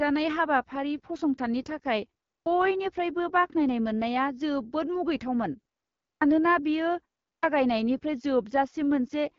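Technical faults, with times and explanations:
Throughout: AMR wideband (HD Voice) codec. The speech is coded at a low rate, which fits an 8.85 kbit/s mode, and nothing is heard above about 7.2 kHz. At this rate the pulse-driven vocal tract model leaves the speech plainly rough and raspy, with a noise-filled top band.
2.35 s, 6.10 s (right after "बाख्नायनाय मोन्नाया जोबोद मुगैथावमोन"), 7.31 s: clipped start after a pause. After silences of 0.31 to 0.55 s the output device has dropped into sleep and must wake again, so about 110 to 116 ms of each onset is swallowed and the sound begins abruptly.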